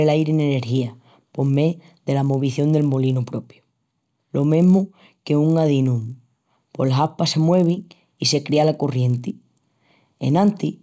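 A resampler restarted on every block runs throughout the speech, converting each 20 ms block separately, which fits a 24 kHz to 16 kHz conversion. Each block edge lacks its true neighbouring samples, leaving a small error that forms a 50 Hz buzz under the speech.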